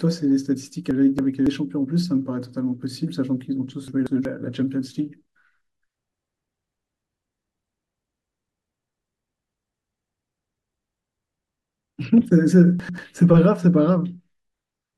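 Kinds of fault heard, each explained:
Frames out of order: at 0.91–1.47, 3.88–4.25, 6.85–7.60 and 12.80–12.98 s, two neighbouring blocks of speech were decoded in swapped order, each half lasting 93 to 372 ms. This gives a garbled flutter, and no time is lost.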